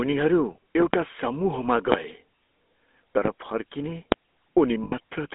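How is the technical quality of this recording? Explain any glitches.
Poor: the speech is audibly coded and marred by repeated pops and a brief dropout near the end.

Throughout, the GSM full-rate codec rebuilds the voice from a vocal-tract model and coarse pulse excitation, confined to roughly 250 Hz to 3.6 kHz. This fits a 13 kbps full-rate coder and leaves a plainly buzzy, gravelly roughness.

At 0.81 to 0.97 s (two in quick succession), 1.92, 3.26 and 4.12 s, loud pops appear, likely from voltage steps such as a switch, plug or static discharge. These sharp clicks spike far above the speech, which continues underneath.

From 4.84 to 4.94 s, lost GSM frames were patched by repeating the last good frame's settings, pointing to about six lost frames. Over roughly 0.24 s, the speech briefly smears into a rough, metallic ring, with no gap longer than about 70 ms.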